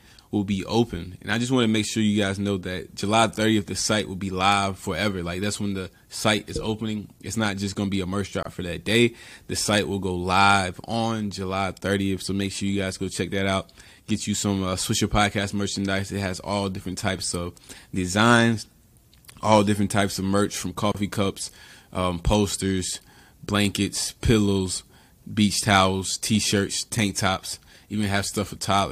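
Gap at a join of encoded pieces at 8.43 s, after "to be a merch", and 20.92 s, after "types of merch from": untrimmed encoder delay and padding leave a gap of about 28 ms before speech resumes.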